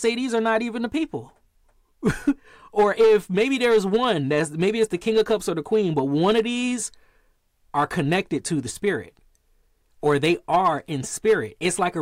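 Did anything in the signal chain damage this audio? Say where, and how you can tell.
Yes, hard clipping at 0.06–0.85, 2.07–2.30, 2.79–5.34, 5.74–6.40, 7.78–8.16, 8.87, 10.06–10.68 and 11.28–11.87 s. Peaks overran a converter or level stage by about 1 to 7 dB, worst at 2.79–5.34 s, and were cut flat, adding harsh, fuzzy upper harmonics.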